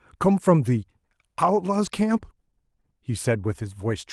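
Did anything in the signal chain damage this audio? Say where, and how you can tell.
Yes, in two places, both at the network stage of the call. From 1.85 to 1.87 s the speech turns briefly rougher and grainier without any gap, which fits a single lost packet rebuilt from error correction. The Opus stream (40 kbps, about 12 kHz bandwidth) carries a low-bitrate duplicate of each frame inside the next packet. When the original went missing, the decoder played that coarser 20 ms copy, so the audio stayed continuous but lost detail.

Around 2.81 to 2.85 s there is a short smear, a wobble where the speech briefly loses its edges. This is short concealed packet loss: about 20 ms of audio arrived too late or not at all, and no backup copy was available. The receiver synthesised roughly 16 ms of fill by extending the preceding sound, following its pitch where voiced and using shaped noise otherwise, then crossfaded back into the real signal.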